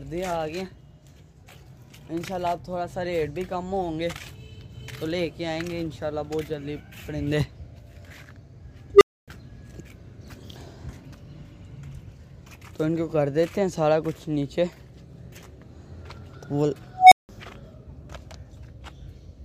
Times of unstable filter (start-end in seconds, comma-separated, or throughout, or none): 8.94-9.28, 16.94-17.29